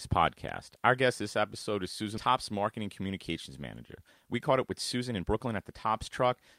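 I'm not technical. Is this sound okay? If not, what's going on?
No. At 2.17 s there is a skip ahead. About a second of the speech is simply missing. The system dropped it while later audio was already waiting. Playback jumps straight over the hole, with no pause or filler to mark it.

Next comes a jitter buffer speed-up. From 2.79 to 3.30 s the speech runs at 109% speed, and from 3.99 s to the end at 115%. The pitch stays the same, but it sounds hurried. The receiver had too much audio stored. It trimmed many tiny slices to catch up.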